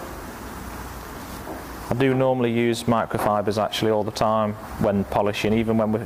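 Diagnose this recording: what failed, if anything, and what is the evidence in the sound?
The failure is at the network stage: clock drift between sender and receiver, with the sender's clock running roughly 4 percent fast. The receiver's jitter buffer keeps overfilling throughout, so it has to keep dropping audio to hold its latency down. The sound carries small, irregular timing hiccups from start to finish.

Those drops appear as repeated timing corrections from 0.39 s to 5.84 s. The receiver trims short pieces at uneven intervals, all in the same direction, so the audio runs at about 104 percent speed.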